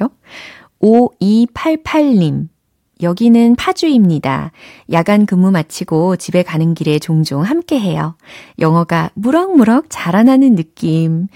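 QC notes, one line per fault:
0.84–1.00 s, 4.95–5.15 s (just before "근무 마치고"), 8.65–8.68 s (just after "길에 종종 함께 해요"), 9.35–9.60 s and 10.20–10.30 s: hard clipping. Brief crackly roughness rides the loudest speech peaks. The signal overshoots what the stage can pass, by about 2 dB in the first two spots and about 1 dB in the rest, so the waveform's tops are sliced flat, adding high harmonics heard as crackle.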